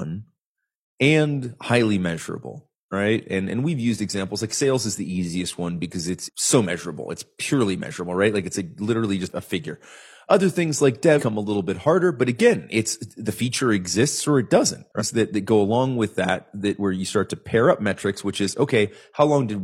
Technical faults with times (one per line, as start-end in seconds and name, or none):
11.15-11.21 damaged data in a compressed stream
14.96-15.02 damaged data in a compressed stream